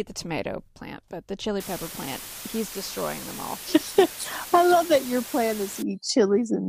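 Between 1.60 s and 5.82 s the speech falls into low bit depth with dither, consistent with only 6 bits or so. The dither turns the rounding error into a steady, even hiss sitting around 15 dB below the voice, without crunchy distortion.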